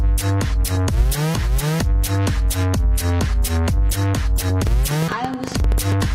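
Something, likely interference from nearby equipment or a faulty connection or power supply, injects a train of clicks from 4.67 to 5.93 s: about fifteen similar pulses at roughly 10.4 per second, unevenly spaced, peaking around 10 dB above the signal and heard as irregular ticking over the sound.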